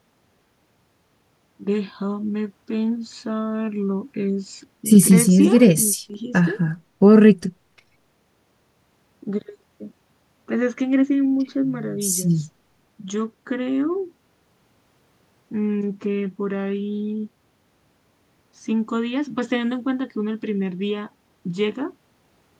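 No technical faults are audible anywhere in this speech.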